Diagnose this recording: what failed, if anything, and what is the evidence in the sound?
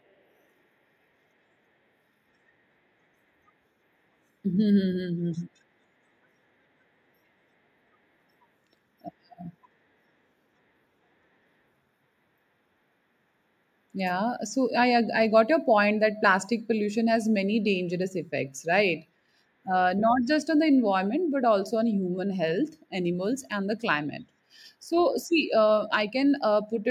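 Nothing failed; no fault is audible in this recording.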